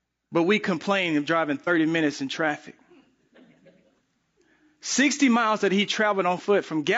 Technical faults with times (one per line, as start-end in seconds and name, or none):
0.00-6.98 low-delay AAC compression
1.64-1.69 AAC frame loss with concealment